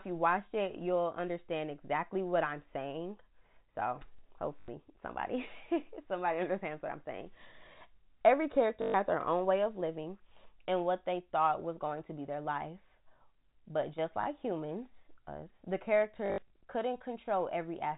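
At 4.19 s an overlapping chunks fault briefly repeats about 25 ms of sound (4.19 to 4.21 s), where one processing chunk starts before the previous one has finished. The join repeats genuine material once, producing a single small stutter or click with no tonal colour. That separates it from the packet faults that follow, which loop a fragment several times.

Packet loss with last packet repeated begins at 4.6 s, with 80 ms (4.6 to 4.68 s) replaced by copies of the last good packet. The spacing fits 20 ms packets, so the loop buzzes at 50 Hz with a robotic edge. A longer 120 ms gap at 8.82 to 8.94 s, just before "their own way of", sounds the same. After "humans us the", losses scatter across 16.26 to 16.5 s, totalling 140 ms with runs up to 60 ms, producing a broken flutter rather than one steady buzz. Throughout, the sound sits in the telephone band, with nothing above 4 kHz.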